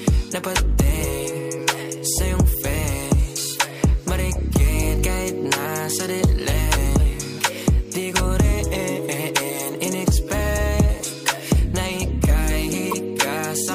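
Damaged data in a compressed stream appears at 1.56–1.60 s, 9.66–9.69 s and 12.90–12.94 s. Corrupted bytes there make the decoder misread frames and lose sync while it hunts for the next valid frame header, producing brief chirps or blips lasting 24 to 40 ms.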